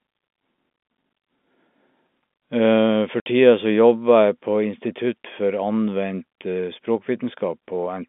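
At 3.20 s the receiver lost a short run of packets and played silence in their place. That is packet loss filled with silence. About 60 ms of the signal is missing, which fits three consecutive 20 ms packets, and the hole runs to roughly 3.25 s. Because the sound stops and restarts instantly instead of fading, the gap has hard edges, chopping the speech. The telephone-band G.711 coding, passing roughly 200 Hz to 3.6 kHz, carries the audio on either side of the hole.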